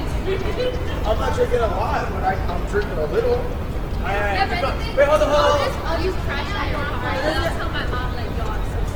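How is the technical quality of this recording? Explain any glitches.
The recording's technical quality is limited by plainly audible codec damage running the whole length of the clip. The sound is likely the result of Opus compression in its CELT music mode at a very low bitrate, around 16 kbps. The bandwidth stays full, reaching about 20.1 kHz, but with so few bits the encoder keeps each band's energy and fills in the detail with noise or folded copies of lower bands. Tonal parts therefore come across grainy, rough and noisy rather than clean.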